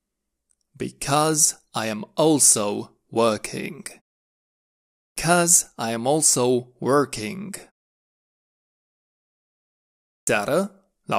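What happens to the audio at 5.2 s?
The output device went idle during the roughly 1.05 s pause and was still waking when sound resumed. This is a clipped start after a pause: from 4.98 to 5.17 s about 185 ms is swallowed, so speech bursts abruptly out of silence, missing its opening sounds.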